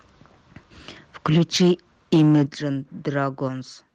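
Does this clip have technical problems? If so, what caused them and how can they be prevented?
Yes. Microphone overload from 1.25 to 1.72 s and 2.12 to 2.43 s flattens peaks, about 6 dB and 5 dB over full scale, with roughly 7% and 15% of samples clipped. The likely cause is input gain set too high. Prevent it by lowering input gain until peaks stay clear of full scale.

Microphone volume stepped down at 1.38 s by 3 dB and at 2.46 s by 9 dB, abruptly dropping speech and background together, likely the call software reacting to the clipping. Prevent it by setting a correct input level beforehand.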